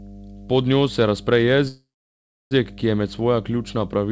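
A speech recording with two faults. A steady 50 Hz mains hum runs through the whole clip, sitting about 20 dB below the speech. It is a low, constant tone. A ground loop or a nearby transformer has let the power line leak into the signal. From 1.68 s to 2.53 s there is a call audio freeze. The sound trails off, then goes silent for about 0.67 s before resuming where it stopped, with nothing lost. The likely cause is delayed packets draining the jitter buffer. That leaves a gap of about 0.83 s. The call path itself carries nothing above 8 kHz, which fits a G.722 codec.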